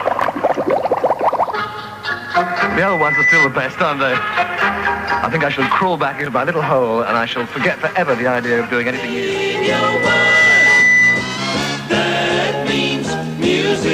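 Loudspeaker feedback squeal appears from 2.43 to 3.54 s and again from 9.19 to 11.49 s: a 2 kHz tone swells over about a second to a few dB above the audio, as mic and speaker form a runaway loop. Spectrograms show a brightening horizontal line.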